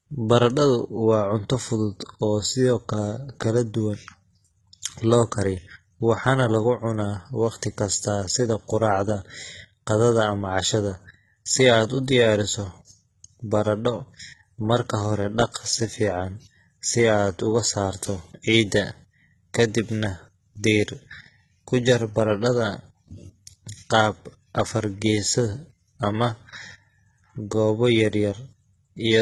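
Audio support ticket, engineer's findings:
Speech, start to end: treble feels synthetic, s sounds gritty and lispy, nothing above about 11.8 kHz. Likely HE-AAC compression, damage heavy, fits a very low bitrate near 16 kbps. SBR copying lower bands upward, so upper harmonics misalign with the real ones.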